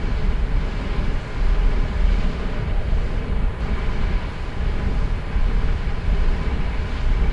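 No technical faults can be heard anywhere in this audio.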